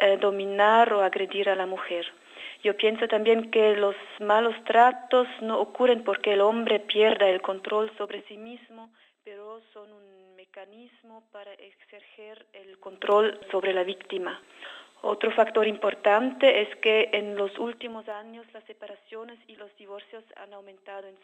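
Zipper noise ticks through three level moves, at 7.55–9.06 s (down roughly 25 dB, about five steps a second), 12.66–13.12 s (up) and 17.60–18.18 s (down). Unsmoothed 3 dB jumps show as waveform staircases and faint vertical spectrogram lines.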